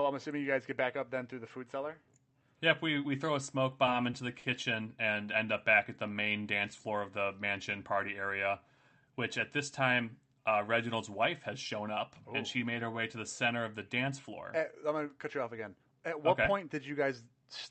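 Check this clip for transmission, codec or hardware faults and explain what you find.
Two network-timing faults are audible in this speech clip, both from the receiver's jitter buffer. The call path itself carries the audio with its high end ending near 8 kHz, which fits Opus at around 64 kbps.

Short stalls from late packets: just after "we throw a smoke", the sound hangs briefly three times, at 3.85 to 3.89 s, 4.11 to 4.15 s and 4.39 to 4.45 s, each a sound held too long. A packet arrived late each time and the buffer ran dry. The receiver stretched the last sound by 20, 20 and then 40 ms until the packet arrived, then resumed from the same point. Nothing is lost, but there is a slight buzz or dip.

Jitter buffer slow-down: between "up back at the" and "dance floor of the", from 6.09 to 6.44 s, the speech drags while its pitch stays the same. The sounds are drawn out, running at about 89% of normal speed. 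The buffer was building up its reserve. It did this by repeating single pitch periods many times in a row, which added 48 ms of audio to that stretch.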